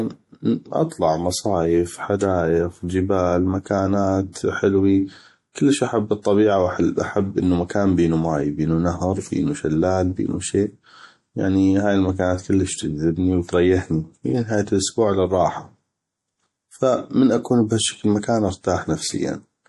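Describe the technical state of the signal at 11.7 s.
At 11.7 s you're hearing the same damage that runs through the whole clip: plainly audible MP3 compression, likely the cause, with nothing above 11.5 kHz. The encoder starved for bits, which fits a low rate around 48 kbps, so weak detail flickers in and out, giving watery, swirly speech with smeared attacks.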